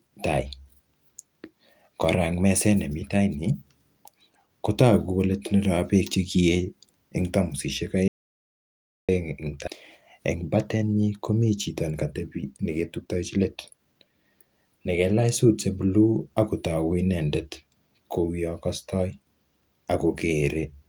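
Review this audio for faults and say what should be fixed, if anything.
Audio dropout to silence from 8.08 to 9.09 s: the input was likely lost, through a disconnected device, failed link or accidental mute, while recording continued writing zeros. The speech cuts off mid-flow into about one second of dead silence with no room tone. Secure connections and monitor input levels so a lost feed is caught immediately.

A skip ahead at 9.67 s: about a second of audio was discarded in transit or by an overflowing jitter buffer while later audio was already queued. Playback jumps forward with no gap, and the two sides are joined almost directly. Size the jitter buffer for real network conditions and avoid overflow-triggered discards.

Jitter buffer speed-up from 10.01 to 14.31 s: the buffer held more audio than its target, so the receiver repeatedly trimmed short pitch-period pieces to shed about half a second of delay. 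Speech runs at about 111% speed at unchanged pitch and sounds hurried. Tune buffer adaptation to recover gradually, spreading delay reduction across pauses instead.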